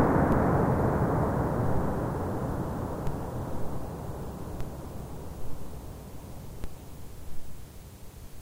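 DC steps occur at 0.32, 3.07, 4.61 and 6.64 s. Each time, the waveform's zero line jumps by about -22 to -23 dBFS, then drains away through a roughly 5 Hz high-pass. Each is heard as a brief low thump while the sound continues unchanged.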